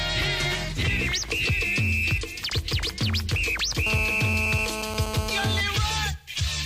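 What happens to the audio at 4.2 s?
GSM phone buzz, 3.87 to 5.61 s: the audio circuit rectifies a nearby phone's 217 Hz bursts, adding a steady, harmonic-rich rasp about 7 dB below the signal.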